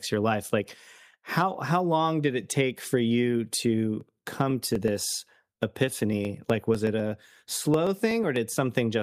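Right after "it take for you", around 4.01 s, periodic USB or driver dropouts kick in and run to 8.49 s: ticks every 0.125 s where something stalls the bus and about half a millisecond of speech gets skipped outright, roughly forty clicks in all.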